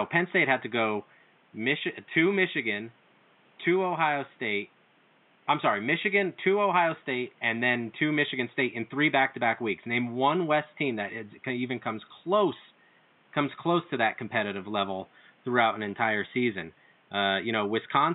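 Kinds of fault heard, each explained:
No technical faults can be heard in this speech recording. A low room noise sits in the background, about 36 dB below the speech, as part of the recorded space rather than anything the system added.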